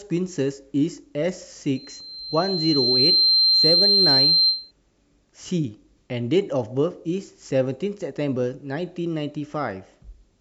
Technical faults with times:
1.75-4.71 loudspeaker feedback squeal

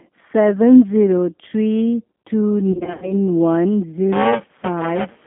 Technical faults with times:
0.00-5.26 G.729 codec
2.72-3.14 VoIP packet loss concealed by the speech codec
4.12-5.26 buffer tearing

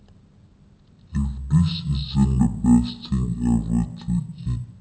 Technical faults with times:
0.00-4.80 stereo read as mono

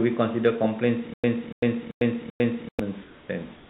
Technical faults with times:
1.14-2.79 stutter with silent gaps
3.02-3.29 comfort noise in place of the background
3.56-3.70 comfort noise in place of the background

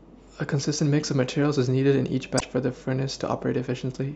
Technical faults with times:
2.37-2.42 damaged data in a compressed stream

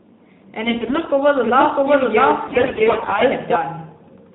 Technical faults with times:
0.64-1.09 AMR bit errors
1.44-3.56 doubled audio track
2.48-3.23 AMR bit errors

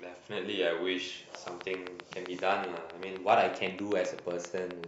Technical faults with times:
1.35-4.85 train of clicks

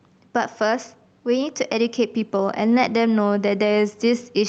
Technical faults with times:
0.00-4.49 gain pumping

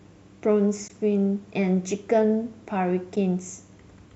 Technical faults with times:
0.88-0.90 AAC frame loss with muting
3.16 AAC frame loss with muting

